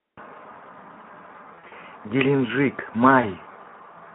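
Right from the start the whole clip carries the sound of the Speex codec, and the damage is plainly audible. The speech has that hoarse, noisy edge you get when a CELP coder is starved of bits for the excitation, which fits a low setting around 11 kbps. The faint room noise, about 55 dB down, is just part of the recording.

From 1.55 to 1.73 s there's VoIP packet loss concealed by the speech codec. Roughly 100 ms went missing, scattered across 160 ms, with the longest gap about 40 ms. The decoder keeps stretching its last pitch and filter and fades the gain, so the speech is stretched out and fades. It stays a bit weak just after, since each frame builds on the previous one.

A second, shorter drop comes at 3.21 to 3.26 s, about 20 ms lost, heard as a brief stretched smear with a dip in level.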